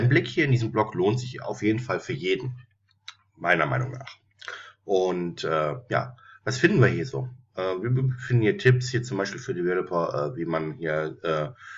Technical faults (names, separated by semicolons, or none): none